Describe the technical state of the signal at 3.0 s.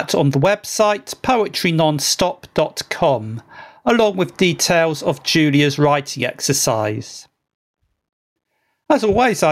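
At 3.0 s the speech is caught in gain pumping, which runs through the whole clip. The level swings by around 15 dB, likely because the input gain is set far too high and a fast limiter or compressor pulls it down on each loud sound. Unlike clipping, the waveform isn't flattened; the overall level ducks, leaving a squashed sound.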